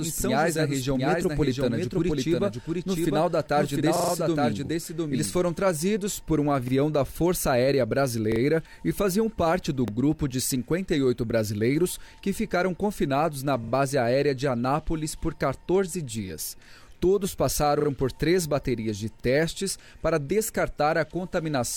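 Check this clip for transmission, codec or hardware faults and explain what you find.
Two faults are present: a doubled audio track at the start, and repeated buffers at seven points.

From the start to 5.52 s, a doubled audio track is heard. A second full-band copy trails about 0.7 s behind, about 5 dB quieter, likely from a slower second capture path. It stops abruptly.

Repeated buffer stutters occur at 3.96 to 4.12 s, 6.68 s, 8.32 to 8.4 s, 9.88 s, 13.64 to 13.72 s, 17.8 to 17.88 s and 19.2 s. When audio arrived late, the last piece was replayed with hard joins. The repeats fit a 40 ms buffer.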